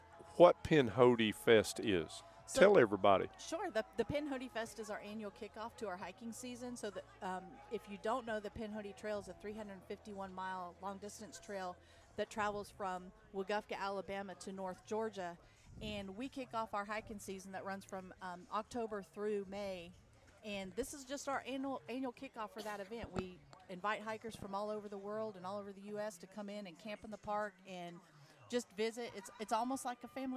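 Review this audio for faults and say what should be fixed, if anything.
No faults were heard; nothing here needs fixing.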